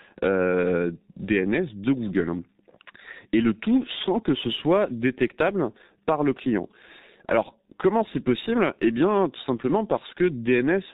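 From the start the speech carries G.723.1 codec damage, and it is heavy. Nothing passes above 4 kHz, and the slow-updating 30 ms frame model, consistent with a bitrate near 6.3 kbit/s, leaves the voice muffled and hoarse with smeared consonants.

From 4.39 s, right after "le tout sans que", until 8.76 s, sample clock jitter adds a faint hiss and roughness. The converter's timing wanders by under a microsecond, producing errors around 50 dB below the signal. These grow on loud, bright passages and vanish in pauses.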